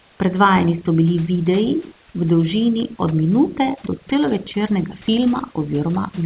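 Speech runs through a telephone-band channel with nothing above 4 kHz, consistent with G.711 mu-law at 64 kbps, and room noise sits about 30 dB below the voice. Overdone noise removal affects the whole clip: bands near the noise estimate are pushed almost to silence, leaving a hollow background with twinkling specks. A codec would not do this, because its coding noise stays steady while these specks flicker.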